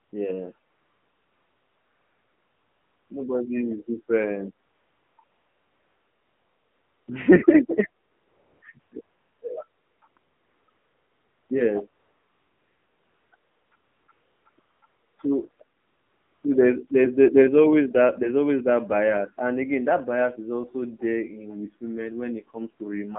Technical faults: AMR narrowband mobile codec; AMR comfort noise

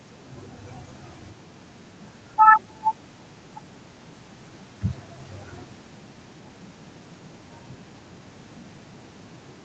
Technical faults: none

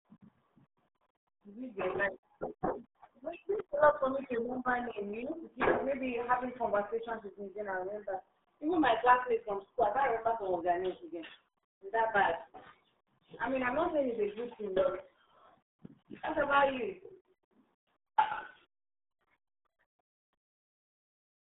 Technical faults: RealAudio 14.4 codec

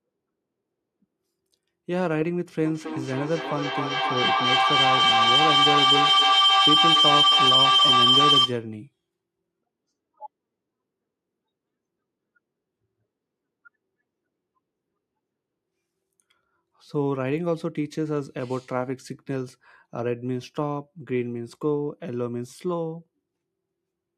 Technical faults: feedback howl

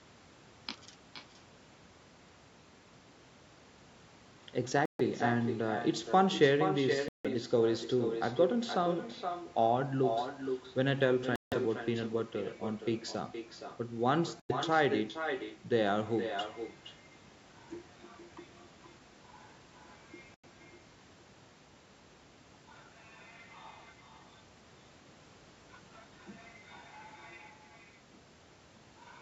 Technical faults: echo with no canceller; Bluetooth dropout

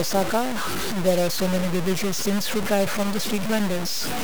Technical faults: low bit depth without dither

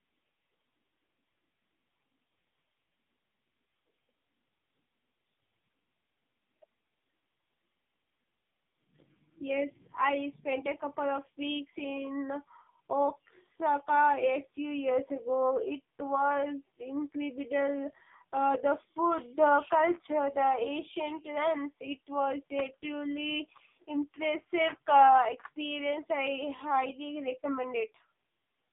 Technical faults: AMR narrowband mobile codec

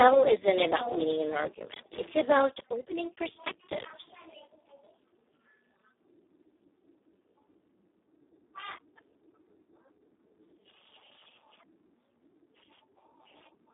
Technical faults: Speex codec

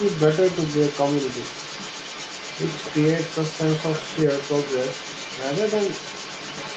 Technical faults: other side's voice leaking through

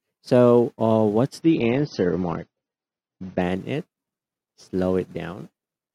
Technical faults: adaptive stream at a lower bitrate

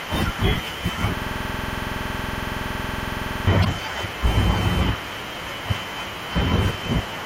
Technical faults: system hang loop; damaged data in a compressed stream

